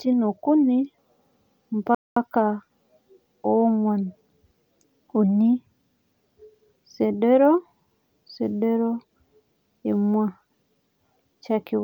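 At 1.95 s the speech halts abruptly mid-flow and stays silent for about 0.22 s, until 2.16 s: a playback stall, likely the player running short of data or its thread being blocked. Unlike a natural pause, the silence cuts in mid-sound rather than at a phrase boundary.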